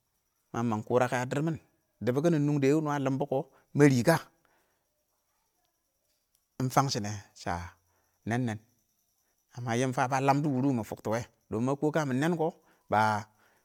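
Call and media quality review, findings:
Speech swirly, smeared and hollow throughout, consonant attacks blurred, nothing above 20.1 kHz. Likely generation loss from about four successive MP3 passes near 130 kbit/s. Each re-encode requantises on a shifted frame grid, compounding noise and spectral holes.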